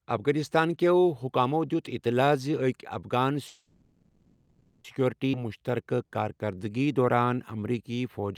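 At 3.47 s the speech stops and a call audio freeze begins, lasting until 4.87 s. The likely cause is packets held up in transit, leaving the jitter buffer empty. The receiver carries the last sound on as a fading buzz or hiss for about 1.37 s, with a brief 30 ms silence at the end. Then the speech resumes exactly where it stopped, with nothing lost. On a spectrogram the filled stretch shows smeared, repeated harmonic bands that fade toward the gap, and in the waveform the envelope decays steadily before the speech returns.

Between 5.32 and 5.36 s there is a skip ahead. Roughly a second of audio was thrown away, which pulls back most of the delay the freeze added, and the two sides are joined with only about 10 ms of fill. It sounds like an abrupt jump in the speech, with a sudden change in content and no real pause. A spectrogram shows the formant patterns breaking discontinuously at a single vertical seam, and the waveform shows a sharp splice with no silent gap.

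From 5.36 s to 8.33 s a jitter buffer slow-down follows. The receiver rebuilds its reserve by repeating single pitch periods and bits of pauses, adding about 288 ms in total, so the speech plays at 91% speed with unchanged pitch. Sounds are drawn out. On a spectrogram the harmonics stay at the same frequencies but stretch horizontally, and the waveform shows runs of near-identical repeated cycles.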